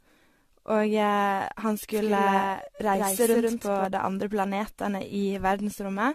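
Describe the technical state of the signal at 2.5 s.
At 2.5 s the speech has two faults. Running through the whole clip is generation loss, most likely from the audio being decoded and re-encoded around seven times through AAC-LC, consistent with a 64 kbit/s chain. Each pass quantises on a shifted frame grid, so the damage stacks up. Nothing remains above 14 kHz, and the sound is swirly, hollow and smeared, with blurred attacks.

The moment also falls inside a doubled audio track running from 1.93 to 3.85 s, likely caused by a second, slower capture path or an edit holding two copies out of step. A full-band duplicate trails the original by about 150 ms at roughly 5 dB lower. It sounds like a dry, echo-like repeat with no decay or room colour, and it starts and stops abruptly at those boundaries.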